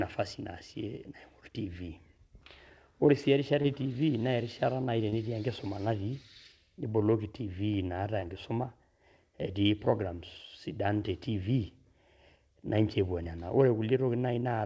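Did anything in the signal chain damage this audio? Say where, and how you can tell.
Yes. In this speech there are three brief smears, each about 20 ms long: at 3.62 s just before "e tiivi na", at 5.10 s just before "enkisuma natii niboloki tiivi", and at 8.20 s right after "natii niboloki tiivi naata". This is short concealed packet loss at the network stage. Each 20 ms chunk arrived too late or not at all, so the receiver extended the preceding sound to fill the gap and then blended back into the real audio.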